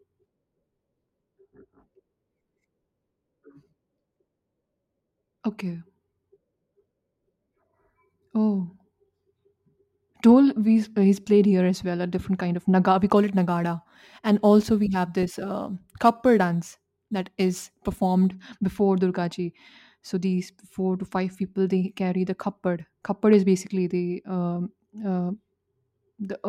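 From 13.16 s to 18.30 s, right after "kind of naga we", the speech shows crude rate conversion. The sample rate was changed by repeating samples rather than filtering, and the pattern of repeats is consistent with a conversion from 44.1 kHz to 48 kHz. The repeating error creates shifted, inharmonic copies of the speech, roughly 35 dB below it. It sounds like a gritty fizz that rises with louder and brighter syllables.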